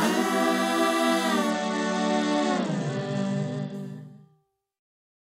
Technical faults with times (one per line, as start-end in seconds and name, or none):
1.50-3.74 Bluetooth SBC bit pool drop